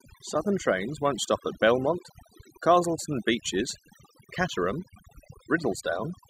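A speech recording with overdone noise removal running across its whole length. The noise reduction was pushed too hard, so any frequency band sitting close to its noise estimate gets cut deeply or gated out entirely. Between phrases the background collapses to near silence dotted with twinkling, chirpy specks where isolated bands flicker on and off. The quieter components of the voice fall below the threshold and vanish along with the noise.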